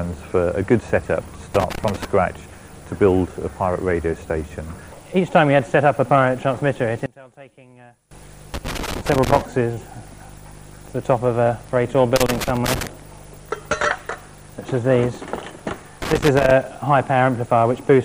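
Loose connector crackle first appears from 1.55 to 2.05 s as an irregular burst of scratchy crackle. A worn or dirty contact is intermittently making and breaking, chopping the signal into fragments, and any DC present on the line turns each break into a small pop.

From 7.06 to 8.11 s the sound drops by about 26 dB to a faint residue. The likely cause is one channel inverted: with one side's polarity reversed, material common to both channels cancels in a mono sum, and only the small difference between them survives.

The same loose connector crackle returns three more times: from 8.54 to 9.41 s, from 12.16 to 12.87 s, and from 16.02 to 16.51 s. Each burst has a ragged, irregular texture of crackle, which fits a contact being disturbed repeatedly rather than a fault that stays in place.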